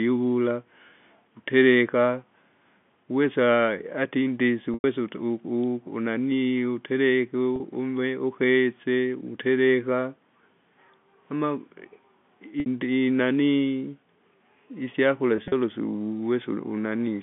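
Packet loss with pitch repetition hits at 4.74 s (100 ms), 7.56 s (40 ms, between "unanaii utereke" and "ukese utereka"), 12.60 s (60 ms) and 15.36–15.52 s (80 ms in scattered runs of up to 40 ms). Missing audio is bridged by looping the last pitch period, so short gaps sound like a brief buzzy hold. The 100 ms gap fades toward silence before the sound cross-fades back in.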